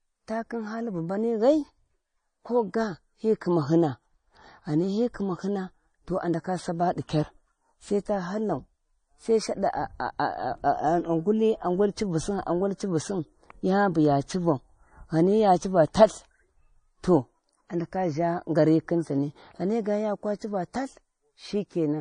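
From the first moment to the end, the speech carries MP3 compression damage that is plainly audible. The treble stops dead at 9.8 kHz, and s sounds turn swirly and watery, which points to a starved bitrate around 32 kbps. That swirl is what sets it apart from a plain low-pass filter, which would dull the top without the flickering texture.

From 0.10 s to 21.99 s a faint, steady rattle of clock slip clicks runs under the speech, roughly twenty per second and hundreds in total. The likely cause is two unsynchronised clocks a few hundred parts per million apart, so a single sample slips at each tick. Unlike dropout clicks, these arrive at a perfectly even rate.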